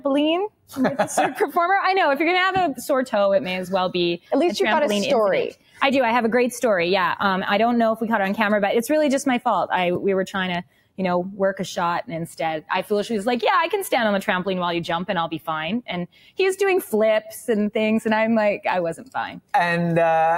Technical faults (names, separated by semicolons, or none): noise suppressor applied to music or sounds; sound cut by the noise suppressor